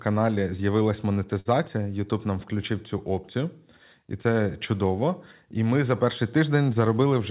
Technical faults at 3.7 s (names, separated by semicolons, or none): none